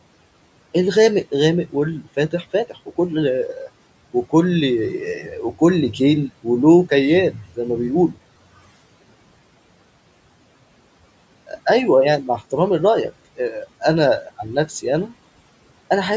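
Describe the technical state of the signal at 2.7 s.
At 2.7 s the noise suppressor cuts into the speech, from 2.7 to 2.9 s. It misjudges soft speech as background and pulls it down by up to about 11 dB, so roughly a tenth of a second of the speech sounds swallowed and faint.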